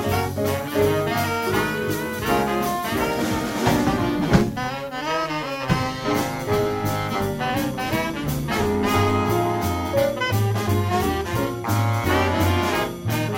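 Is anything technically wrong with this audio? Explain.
Yes, from about 4.15 to 9.26 s there's a filter restarted on every block. The filter drops its state at each block boundary and starts again from silence, so each block opens with a small transient. You hear that as a 100 Hz buzz that rises and falls with the sound's level.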